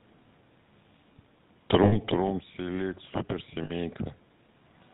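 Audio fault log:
Throughout: GSM full-rate codec. Buzzy, gravelly roughness with nothing above 4 kHz, consistent with a 13 kbps GSM full-rate stream driving a vocal-tract model with sparse regular pulses.
1.84–1.97 s and 3.64–3.71 s: lost GSM frames. A rough metallic ring of about 80 ms, then 60 ms, as the last good frame's settings are held.
2.1–4.03 s: automatic gain rising. Voice and background swell together by about 6 dB after the talker moves back near 2.0 s, as gain climbs to offset the quieter input.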